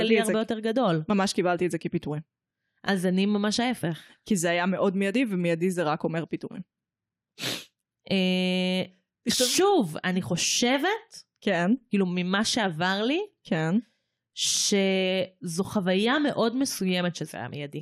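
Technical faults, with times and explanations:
2.50 s, 6.52 s, 10.55 s and 14.57 s, overlapping chunks: a brief stutter or click recurs about every 4 s as the speech skips back and replays roughly 21 ms. Each 4.0 s chunk starts before the previous one finished, so that sliver plays twice at every join.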